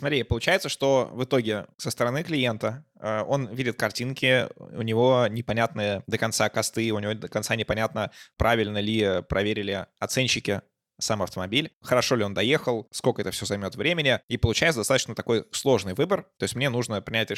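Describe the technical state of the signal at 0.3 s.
At 0.3 s the speech signal is intact, with no audible fault at that moment.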